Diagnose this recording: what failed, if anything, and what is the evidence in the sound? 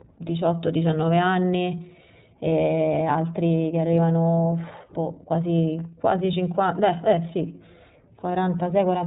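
Codec stage: the speech went through the iLBC codec, which removes everything above 4 kHz and adds a plainly rough, synthetic edge, fitting a 13.33 kbps mode.

Network stage: lost iLBC frames at 2.49 to 2.52 s. The decoder repeated the last pitch cycle through the gap, giving a brief, slightly buzzy or breathy hold that clears at once.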